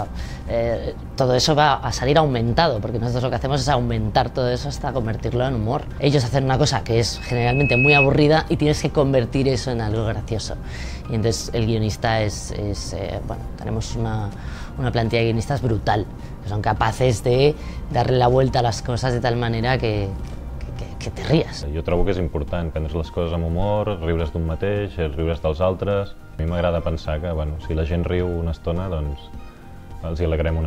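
A single 2.6 kHz tone swells from 7.16 s over roughly 0.7 s into a squeal about 10 dB above the sound, stopping at 8.09 s: loudspeaker feedback squeal, a microphone-to-loudspeaker loop exceeding unity gain.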